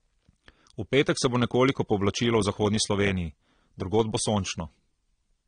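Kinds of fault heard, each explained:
AAC compression: The speech has a hard ceiling at about 9.7 kHz and plainly audible coding damage throughout. That points to a likely low-bitrate AAC-LC encode, roughly 32 kbps, where the encoder drops the top end and quantises each frame coarsely.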